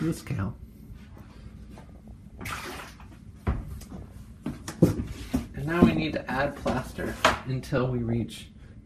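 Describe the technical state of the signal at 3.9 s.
At 3.9 s the signal sits inside a burst of DAB burbling running from 3.81 to 4.13 s. Bit errors have slipped past the error correction into the audio frames, so wrong samples put short blips of noise into single sub-bands and wrong scale factors make sub-bands leap in level for up to a frame. The result is a burst of burbling distortion laid over the sound. Unlike steady codec distortion, it comes as a short, erratic eruption whose density fits a run of corrupted frames at an error rate well under one percent.

Underneath, and throughout the clip, the sound is dull and granular, with a gurgling texture as upper sub-bands drop out and return and the surviving bands are coarsely quantised. This is most likely MP2 compression at a low rate, around 80 kbps. What separates it from the burbling is its constancy. It never flares into chirps, staying a dull, flickering loss of top end and a grainy smear across the whole clip, with the burbling burst riding on top of it at this moment.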